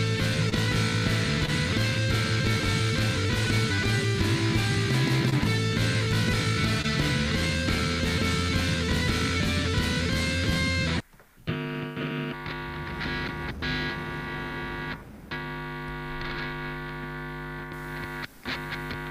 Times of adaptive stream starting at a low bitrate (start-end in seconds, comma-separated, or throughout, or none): none